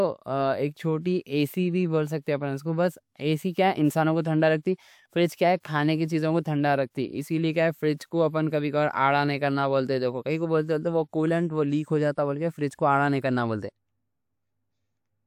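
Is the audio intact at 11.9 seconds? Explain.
Yes, the audio is intact at 11.9 seconds, with no fault of any kind at that point in the speech.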